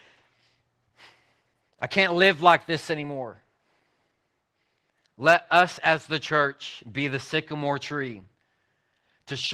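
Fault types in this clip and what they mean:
Opus voice compression: Low-rate speech coding throughout. The speech sounds hoarse and slightly robotic, which fits hybrid Opus near 16 kbps coding its excitation coarsely.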